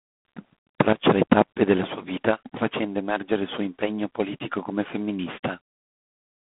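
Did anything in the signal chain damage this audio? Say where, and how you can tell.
Yes. At the codec stage, G.726 ADPCM at 24 kbit/s adds a harsh, rasping hiss that rises and falls with the speech. A spectrogram shows a 150 Hz to 3.5 kHz band, empty above 3.8 kHz.

A sudden gain jump from 0.93 to 1.03 s, just before "le tappe della sua", drops speech and background together by about 12 dB. The waveform envelope steps abruptly, which likely means a digital gain change was applied without a ramp.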